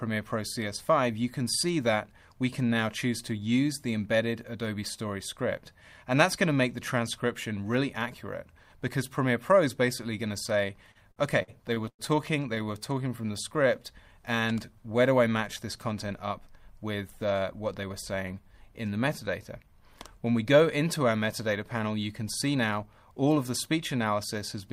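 From 10.91 to 12.01 s, repeated stalls (stutter): packets arrived late seven times, and the receiver extended the preceding sound to fill 274 ms. The longest hold lasts 99 ms. Nothing is lost, but the audio drags and stutters.

At 12.55 to 12.59 s, a short stall from a late packet holds the sound for 18 ms until the packet arrives, leaving a brief sustain or dip.

From 12.64 to 13.77 s, a jitter buffer slow-down rebuilds reserve by repeating pitch periods, adding 86 ms. Playback runs at 93% speed with unchanged pitch.

Jitter buffer speed-ups at 15.90 to 16.41 s (107%, roughly 40 ms removed) and 22.55 to 23.23 s (108%, roughly 70 ms) trim pitch periods, making the audio sound hurried.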